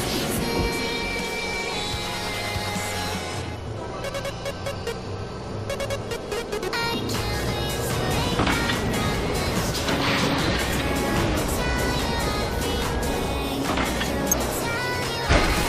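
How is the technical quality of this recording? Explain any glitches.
The recording is marred by four brief glitches, all from damaged data in a compressed stream, at 1.52, 3.66, 10.72 and 14.32 seconds. At each point part of the encoded audio is corrupt, so the decoder misreads the affected frame, loses its place, and has to hunt for the next valid frame header before it can resume. Each event lasts under 20 ms and is heard as a short chirp or blip cutting sharply across the sound.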